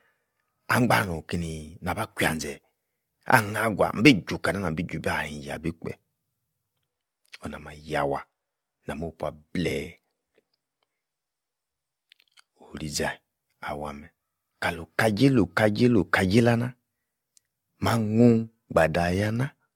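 From start to finish the speech carries a swirly, hollow coloration, with consonant onsets smeared. Nothing is present above 17 kHz. The damage goes beyond what a single lossy encode would cause, and the likely cause is generation loss: around seven decode and re-encode passes, which fits AAC-LC at 96 kbit/s. Each pass requantised on a shifted frame grid, so the noise and spectral holes accumulated.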